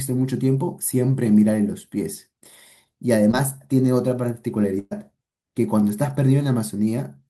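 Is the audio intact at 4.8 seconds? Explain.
No. From 4.79 to 4.93 s there is a burst of packet loss: about 120 ms of audio never arrived, and the receiver filled the gap by extending the last sound while fading it. This produces a brief held buzz or hiss, then resumes with that stretch skipped.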